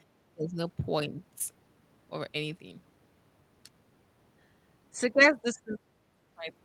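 Two dips in level occur where speech is suppressed in double talk. From 0.34 to 0.59 s the speech falls sharply, by about 25 dB at its deepest. From 5.42 to 5.8 s a shallower dip of about 10 dB lowers it briefly. The likely cause is an echo canceller that couldn't separate this talker from loudspeaker echo while the far side spoke, so it attenuated everything.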